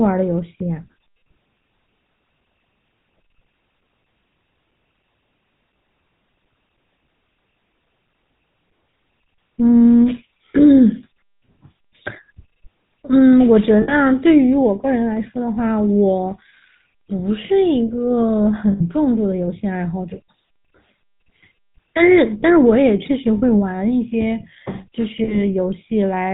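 Throughout, the speech carries the buzzy, gravelly roughness of the GSM full-rate codec, which points to a 13 kbps stream. A model of the vocal tract is driven by sparse pulses, and nothing above 4 kHz survives. This is a grainy texture, unlike the watery swirl of transform codecs.

Lost GSM frames occur at 13.82, 18.72, 23.38 and 25.24 s, lasting about 60, 80, 40 and 40 ms. Each gap is filled with a brief metallic ring as the last good sound is held. There are no silent gaps, which separates these from plain dropouts.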